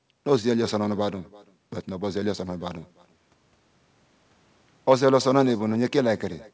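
From start to finish the speech carries echo with no canceller: the far end's loudspeaker output is picked up by its microphone and returned without removal. Each phrase is followed, roughly a third of a second later, by a copy about 24 dB below the direct signal, thinner, a faint trailing shadow. The call path's band limit at 8 kHz, which fits a G.722 wideband link, is audible as missing top end.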